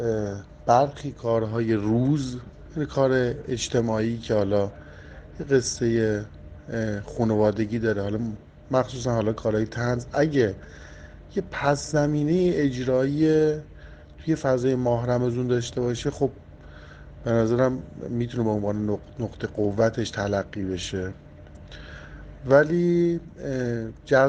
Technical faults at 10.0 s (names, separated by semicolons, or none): none